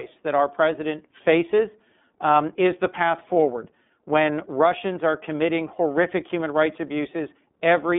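Throughout, the speech has been passed through the iLBC codec, which codes each 30 ms frame on its own, at a rate that fits its 13.33 kbps mode. Nothing above 3.7 kHz survives, leaving a narrow 150 Hz to 3.6 kHz line band, and a plainly audible rough, synthetic edge.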